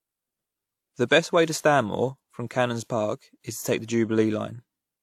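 From start to end the speech carries two overlapping sets of compression artefacts, likely from transcoding between lossy codecs: a WMA-style encode at around 96 kbit/s re-encoded as HE-AAC near 40 kbit/s. It sounds smeared and swirly, with synthetic-sounding highs. A spectrogram shows a hard ceiling and patchy, copied-looking upper bands.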